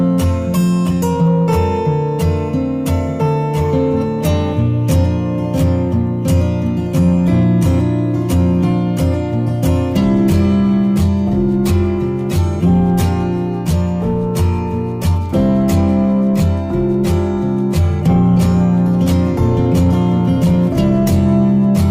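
Nothing here to flag: the audio runs its whole course without a single glitch, dropout or hiccup catching the ear.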